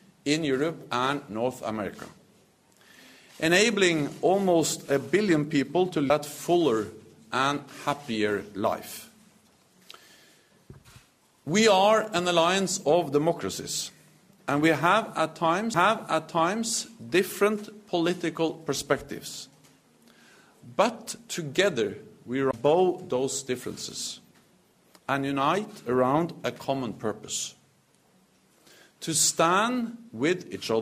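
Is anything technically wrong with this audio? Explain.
Yes, there are three CD skips, at 6.09 s, 15.74 s and 22.51 to 22.53 s. The laser jumps tracks, so after a very brief mute (roughly 20 ms at the last one) playback resumes elsewhere. Each is heard as a tick and an abrupt jump. On the waveform it shows as a short gap with a discontinuity, and on the spectrogram as a thin vertical broadband line.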